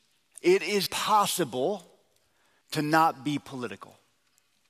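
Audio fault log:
0.86 s, audio missing between chunks: the sound jumps abruptly forward, with roughly 300 ms gone and the two edges joined without any silent gap, unlike a dropout's hole. The likely cause is a recorder working in 2.0 s chunks switching between them.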